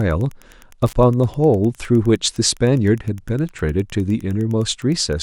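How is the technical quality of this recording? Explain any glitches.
The speech carries one fault for its whole length. Wi-Fi interference runs throughout: a nearby radio's beacons, every 102.4 ms, are rectified by the audio circuit, giving a faint, steady ticking about ten times a second, well below the voice.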